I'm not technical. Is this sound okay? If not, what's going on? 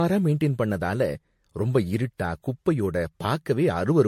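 No. The speech sounds swirly, smeared and hollow throughout. This is generation loss, likely from being compressed as MP3 again and again, several times over.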